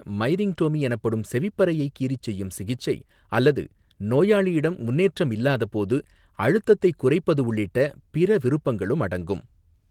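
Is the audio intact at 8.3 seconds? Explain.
Yes, at 8.3 seconds the audio is intact, with the Opus voice compression running normally and causing only light codec damage there.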